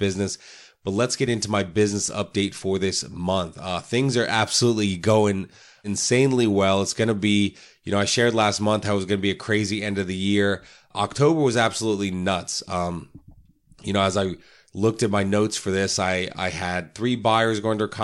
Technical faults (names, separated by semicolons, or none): none